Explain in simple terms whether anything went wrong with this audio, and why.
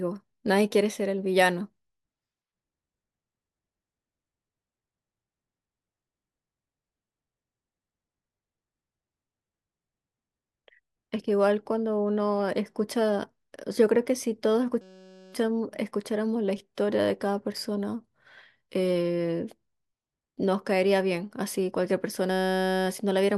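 At 14.82 to 15.34 s and again at 22.31 to 22.86 s, the speech gives way to a flat, steady buzz. This is a system hang loop: the computer briefly froze while the sound hardware replayed one tiny 5.33 ms slice about 188 times a second, which fits a 256-sample buffer.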